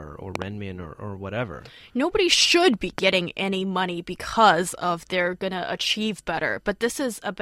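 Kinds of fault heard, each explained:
Loud pop: a sharp double pop between 0.35 and 0.44 s and a single one near 2.98 s jump roughly 15 dB above the speech, which carries on beneath. The likely cause is a sudden voltage pulse from a switch, plug or static discharge.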